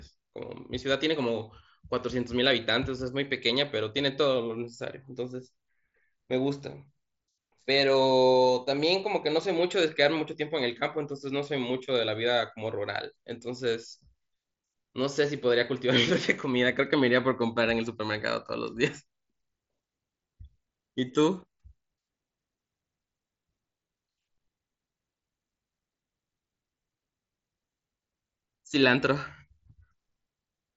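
No technical faults detected.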